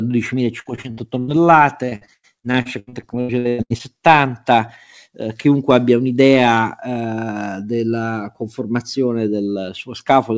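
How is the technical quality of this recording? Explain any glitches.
The recording is damaged by two bursts of repeated packet loss (robotic sound) early on, heard through a call path with nothing above 8 kHz.

From 0.6 to 1.3 s, and again from 1.86 to 3.81 s, packets kept going missing. Each gap, up to about 0.1 s, was patched by stretching the previous sound, leaving the speech choppy.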